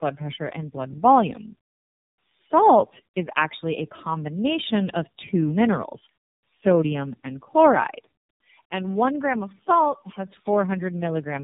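Throughout, the speech sounds rough, muffled and warbly, with nothing above 3.8 kHz: tandem speech coding, with three speech codecs in a row each re-coding earlier damage.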